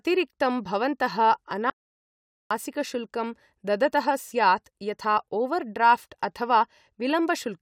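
From 1.70 s to 2.51 s an audio dropout to silence occurs, likely lost input: about 0.81 s of speech becomes silence with no room tone.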